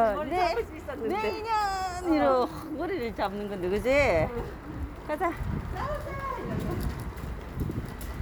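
Nothing here trips any alarms; the sound runs along without a single glitch or hiccup worth pointing out.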